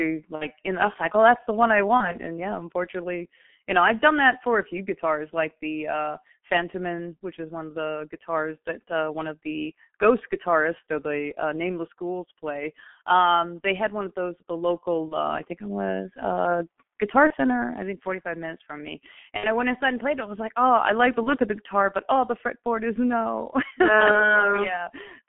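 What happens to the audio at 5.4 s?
At 5.4 s the speech is muffled and hoarse, with smeared consonants, and this holds for the whole clip. It is heavy G.723.1 codec damage: a 200 Hz to 3.4 kHz telephone band and a slowly updated voice model in 30 ms frames, consistent with roughly 6.3 kbit/s.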